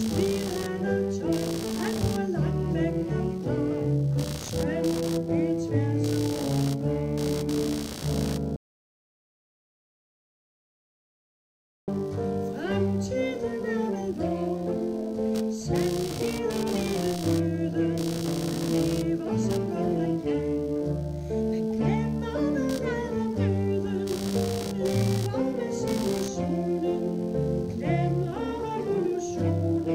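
From the start, computer activity noise runs under the sound: a buzzing, scratchy pulse repeating at around 70 times per second, roughly 15 dB below the programme level. Processor or peripheral load is disturbing the shared ground, so the buzz follows the machine rather than the audio.

At 8.56 s the audio drops out to silence until 11.88 s, a gap of about 3.3 s with no room tone. The input was likely lost while silence continued to be written, so that stretch is unrecoverable.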